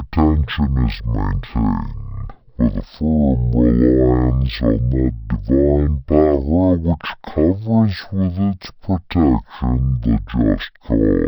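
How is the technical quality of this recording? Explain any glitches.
The technical quality is poor, because one fault runs through the entire recording. From start to finish it is a case of stereo read as mono. The file's left and right samples, which alternate in the stream, have been played back one after another as a single channel. The speech therefore runs at half speed and sits a full octave, 12 semitones, too low, sounding slow, heavy and drawn out. On a spectrogram the speech harmonics are compressed into the lower half, with a fainter mirrored copy reflected into the upper half. In the waveform, every syllable is stretched to twice its proper length.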